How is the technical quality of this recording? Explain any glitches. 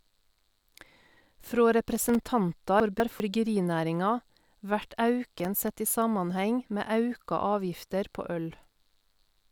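The recording has clear technical faults: two bursts of crackle and one jumbled passage.

From 1.96 to 2.26 s, and again from 5.27 to 5.75 s, there is processor overload crackle. The processor misses a run of buffer deadlines, and each miss drops in a sliver of silence under a millisecond long. The result is a gritty tearing over the speech. Unlike a single dropout, it is a dense cluster of tiny gaps, and it is sparser in the second burst.

From 2.8 to 3.2 s, chunks play out of order. A 200 ms chunk arrives one chunk late and plays after the chunk that should follow it. You hear a garbled, jumbled moment. Nothing is missing, which separates this fault from a dropout: the sound is all there, just rearranged.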